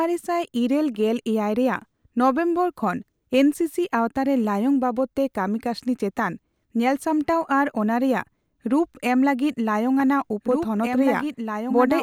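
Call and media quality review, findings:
Doubled audio track, 10.0 s to end: a slower second capture path or a misaligned edit is likely holding a duplicate stream. The full-band copy runs about two seconds behind and about 5 dB down, dry, cutting in abruptly over the live speech.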